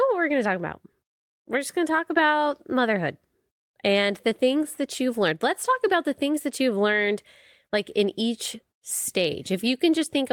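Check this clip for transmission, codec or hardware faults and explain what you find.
Nothing in this speech recording points to a fault. There is nothing to report or explain.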